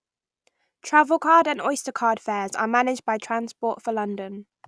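A recording of speech, with nothing technically wrong with it.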